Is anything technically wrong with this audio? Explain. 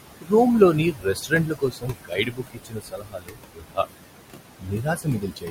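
Yes. Noise suppressor artifacts run through the whole clip. The suppressor judges each frequency band frame by frame and pulls down anything it reads as steady noise, here by about 21 dB. The room noise, sitting only about 9 dB below the speech, is therefore pumped: it sinks in the pauses and swells back under the talking.

The same processing also causes speech cut by the noise suppressor, because it mistakes parts of the speech for noise. This happens from 0.21 to 0.33 s, with about 0.1 s affected and drops up to about 19 dB. It happens again from 0.92 to 3.79 s, where roughly 2 s is affected and drops reach about 21 dB. The last stretch runs from 4.6 s to the end, with roughly 0.7 s affected and drops of about 19 dB. In these passages, softer sounds and word endings are turned down along with the background, so they come across as swallowed or faint.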